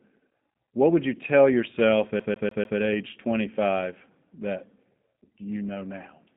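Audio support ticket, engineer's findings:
G.729 codec in the path, whole clip. 8 kbit/s pulse-coded speech model, band limited to 150 Hz–3.7 kHz: nothing above 3.7 kHz, plainly rough, synthetic speech texture.

CD stuck on one turn, 2.20–2.79 s. Scratch bounces the laser back one track each rotation: same 147 ms segment repeats four times, short mute at each jump, fast even stutter.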